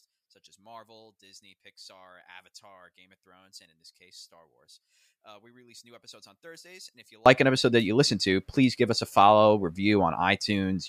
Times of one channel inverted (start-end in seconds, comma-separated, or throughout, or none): 0.00-7.26